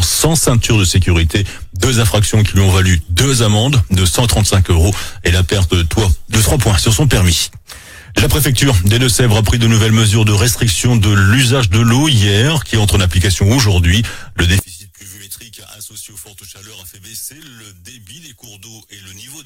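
From 14.59 s to the end of the clip at 19.46 s, the level of the mono sum falls by about 23 dB and the shared content almost disappears, leaving a faint residue. The likely cause is one channel inverted: with one stereo channel's polarity reversed, whatever both channels share cancels when they are summed. On a waveform the envelope collapses sharply at 14.59 s; a spectrogram shows the bands dropping to a faint residue.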